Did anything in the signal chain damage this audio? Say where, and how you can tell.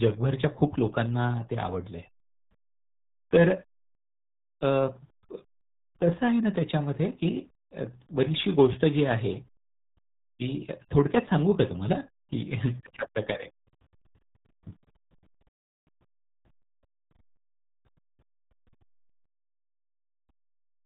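Yes. The damage sits at the codec stage and runs through the whole clip: this is the RealAudio 14.4 codec. The speech has no content above about 3.8 kHz, so consonants lose their edge and the voice sounds muffled, with a heavy gargling, watery texture. That combination of a hard upper limit and coarse spectral smearing points to an 8 kbit/s speech coder throwing away most of the signal detail to fit dial-up bandwidth.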